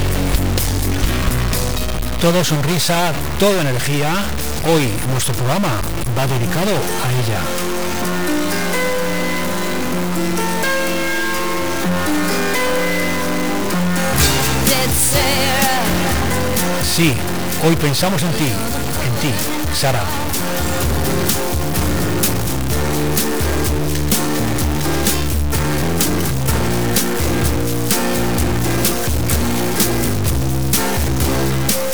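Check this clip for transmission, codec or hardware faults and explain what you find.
There is one hardware fault, and it runs through the whole clip. It sounds like a stuck bit. The sound carries a harsh, buzzy distortion from start to finish. Quiet passages fill with a steady hiss of noise. The likely cause is one data bit held at a fixed value by a broken line or converter. Samples where that bit should differ jump by a step of roughly -15 dBFS. That fairly high bit makes the added noise loud.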